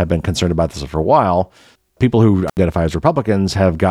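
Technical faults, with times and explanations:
2.48–2.57 s, intermittent contact: right after "a while people who", a loose connection opens for about 73 ms, so the speech drops to faint hiss with crackle either side.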